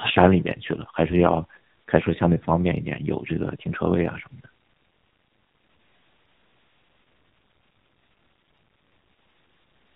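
A speech clip carrying AMR narrowband mobile codec damage from start to finish: nothing above 4 kHz survives, and the heavy buzzy, synthetic coarseness fits a low mode around 5.9 kbps. A plain telephone band-limit would muffle the sound without adding that artificial buzz.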